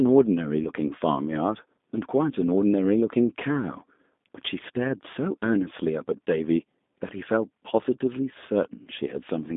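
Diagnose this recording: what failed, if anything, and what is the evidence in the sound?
Throughout the speech the sound is narrow, slightly rough and synthetic, with nothing above 3.7 kHz and little below about 200 Hz. That points to the codec stage, a G.729 codec at what sounds like 8 kbit/s. It rebuilds speech from a vocal-tract model and sparse pulses instead of the actual waveform.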